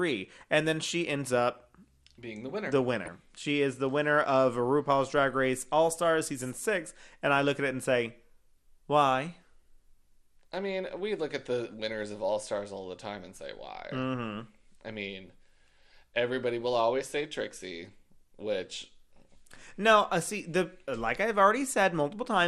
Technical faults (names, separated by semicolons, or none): MP2 compression; DAB burbling